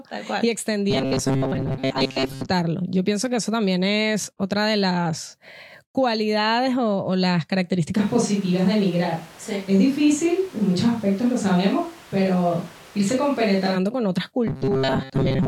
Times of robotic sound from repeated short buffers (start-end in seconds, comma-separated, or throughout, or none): 0.91-2.50, 14.47-15.47